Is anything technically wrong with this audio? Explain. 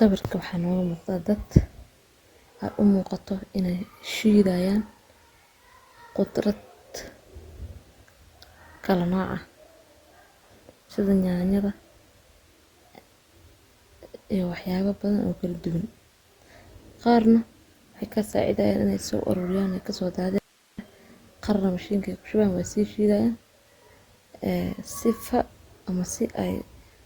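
Yes. There is an audio dropout to a faint residue in this speech clip. From 20.38 to 20.79 s, about 0.4 s, the speech cuts out abruptly mid-flow. Only hiss remains, roughly 35 dB below the normal level. This is likely a brief loss of the wanted signal while the path after the break stayed live, so its noise floor carries through. The break starts and ends sharply, not like a natural pause or a fade.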